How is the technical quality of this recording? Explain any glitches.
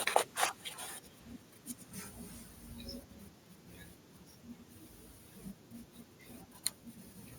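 The recording has one kind of fault, an echo leak, heard in three short bursts near the start: 0.26 to 0.35 s, 0.53 to 0.70 s and 1.07 to 1.38 s. Each time, a faint copy of the speech returns about 390 ms late, roughly 25 to 35 dB below the direct sound. It is likely from the far end's loudspeaker being picked up by its microphone and not fully cancelled. On a spectrogram, weak harmonic traces repeat the speech pattern, offset by that same delay.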